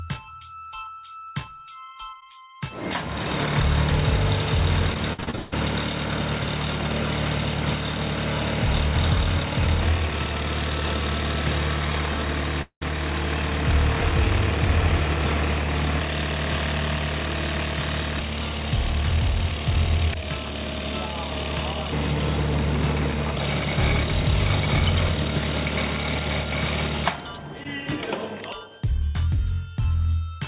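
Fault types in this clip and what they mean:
Repeated packet loss (robotic sound): Between 4.94 and 5.54 s the audio breaks up into six short holes in quick succession, the longest about 164 ms. Each hole is patched by stretching out the sound just before it, so about half of that 0.6 s span is concealment rather than real audio, and about 300 ms of the original is missing. The result is a choppy, robotic stutter over the narrowband, 4 kHz-limited call sound.
Long network dropout: At 12.62 s the audio stops for about 200 ms and returns at 12.83 s without the missing part. For part of that gap the last sound is carried on as a fading buzz. About 90 ms of silence follows before the audio resumes, so the stretch sounds like a smeared tail, then a hole, then an abrupt restart. This pattern points to a brief network outage as the likely cause.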